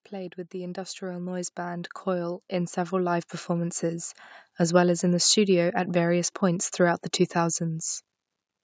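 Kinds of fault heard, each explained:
Automatic gain rising: the gain control judged the input too quiet and ramped its gain up by about 14 dB, speech and background swelling together from 0.09 to 4.19 s.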